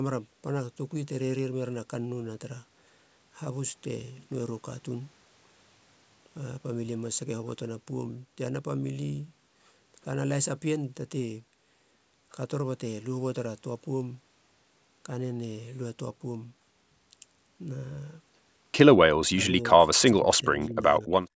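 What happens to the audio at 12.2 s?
Nothing goes wrong at 12.2 s: the speech carries on intact there, with only the ordinary call microphone processing in place, which trims the deepest bass and leaves nothing above 8 kHz.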